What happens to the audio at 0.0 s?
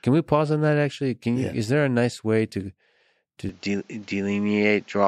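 Nothing goes wrong at 0.0 s; the audio is clean there, with no dropout, click or distortion.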